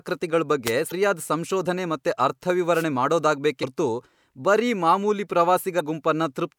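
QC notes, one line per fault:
0.65 to 0.72 s and 2.72 to 2.85 s: wireless microphone noise hit. The radio signal fades briefly, so receiver noise rises over the voice as a short swish of static.
0.88 to 0.92 s, 3.59 to 3.64 s and 5.76 to 5.81 s: damaged data in a compressed stream. Corrupted bytes make the decoder misread frames and lose sync, giving a brief chirp or blip.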